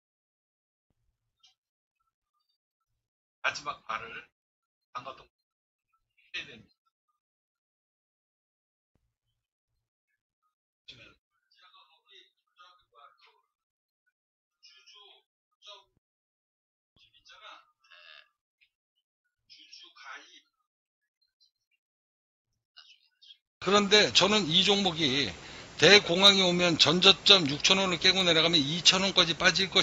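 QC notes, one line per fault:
No fault to note in this clip.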